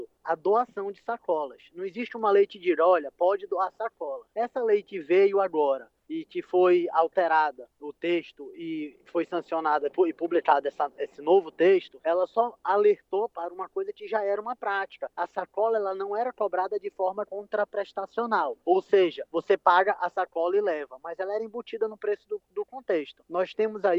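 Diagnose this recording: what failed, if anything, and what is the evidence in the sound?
Nothing failed here: every stage from capture through to playback seems to have done its job, and there's no audible sign of trouble anywhere along the chain.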